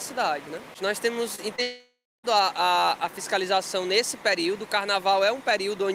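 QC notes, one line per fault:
1.35–1.40 s and 1.56–1.60 s: short concealed packet loss. About 20 ms vanished each time, bridged by extending the preceding sound, so each is a brief smear, not an audible gap.
1.62–2.26 s: the sound stretches into a fading buzz or hiss, then about 0.26 s of silence, and returns with over half a second missing, likely a long network dropout.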